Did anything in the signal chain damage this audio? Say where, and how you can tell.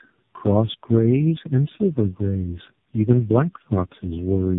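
Yes. The damage is in the codec stage and runs through the whole clip. This is tandem speech coding: the speech sounds rough, muffled and warbly throughout, with nothing above 3.8 kHz. The roughness is stronger than one low-rate coder would leave. That fits about three speech codecs in a row, ending at something like AMR-NB at 5.15 kbit/s. Each codec re-encoded the previous one's degraded output, so the artefacts compounded at every hand-off.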